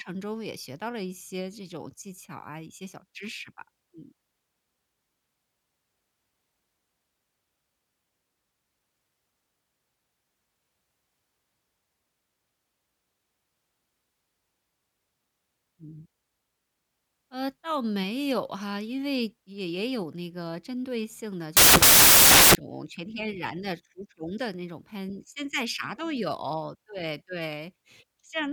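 From 21.57 to 22.55 s, samples built from the wrong bytes turn the speech into loud, harsh broadband noise, filling the spectrogram with broadband texture.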